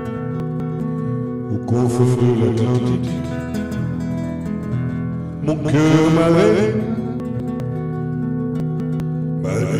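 A doubled audio track runs through the whole clip. A second full-band copy of the sound trails roughly 150 ms behind, about 5 dB quieter, with no decay or room colour. It is likely captured twice over a slower path, or an edit holds two copies out of step.

Chunks out of order occur at 0.4 to 0.8 s, 7.2 to 7.6 s and 8.6 to 9.0 s. In each span, a 200 ms chunk plays one chunk late, after the chunk that should follow it. Nothing is lost, but the order is wrong, leaving three hard joins and a jumbled moment.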